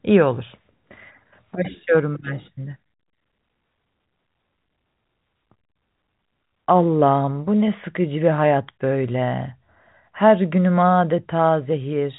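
Nothing technically wrong can be heard in this speech recording. It carries the narrow band of G.711 telephone coding, with nothing above about 3.8 kHz reaching the ear.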